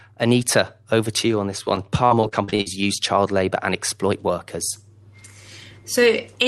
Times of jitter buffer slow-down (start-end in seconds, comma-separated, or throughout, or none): 2.68-2.88